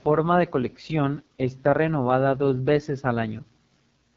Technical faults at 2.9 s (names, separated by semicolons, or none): AMR wideband (HD Voice) codec